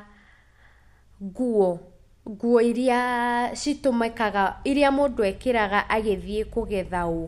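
No technical faults can be heard anywhere in the recording, and the signal stays steady and intact throughout.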